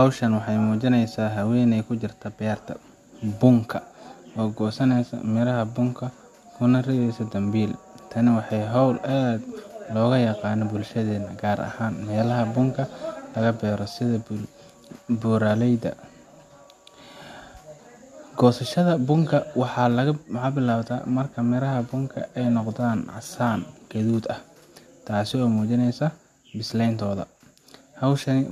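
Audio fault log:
Nothing stood out on listening to this speech recording.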